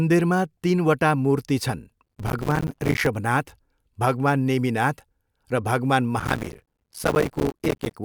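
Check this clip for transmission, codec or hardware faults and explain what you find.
Processor overload crackle occurs twice, from 2.04 to 3.07 s and from 6.20 to 7.94 s. The processor repeatedly misses its deadlines for buffers of roughly 5 ms. Each miss leaves a hard-edged gap of silence, and hundreds of these gaps tear the speech into gritty crackle.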